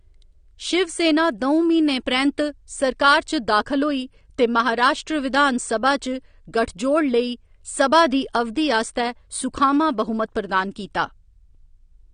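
Speech with audible AAC compression damage throughout, sounding dull and smeared, likely from low-bitrate AAC-LC around 32 kbps; a spectrogram shows a hard ceiling at 9.7 kHz.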